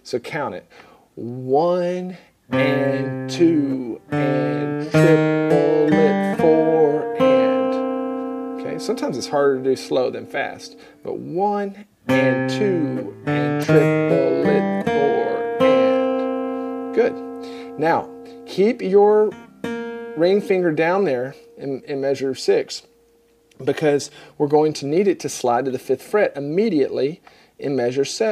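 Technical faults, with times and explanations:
No technical faults can be heard anywhere in the clip; the signal stays continuous and intact throughout.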